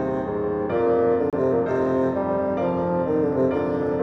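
A gap between stream segments: the timestamps of two adjacent segments leave a small hole, which the player fills with silence. The audio drops out abruptly from 1.30 to 1.33 s, a hard-edged silence of about 28 ms, then resumes with nothing missing.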